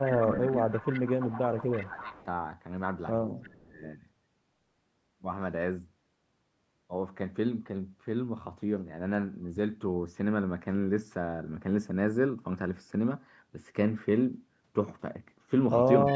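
From 0.05 to 0.86 s, 1.07 to 2.26 s, 3.42 to 3.81 s and from 16.09 s to the end, the speech dips by up to about 15 to 25 dB. This is speech suppressed in double talk, likely the echo canceller ducking the talker. On the waveform it shows as sudden envelope troughs.

At 0.44 to 0.51 s, 0.72 to 2.24 s, 3.43 to 3.49 s and from 16.06 s, a faint copy trails 330 ms behind, about 15 to 30 dB down. This is echo leak, likely loudspeaker pickup the canceller missed. On the spectrogram it appears as weak, shifted replicas of the speech harmonics.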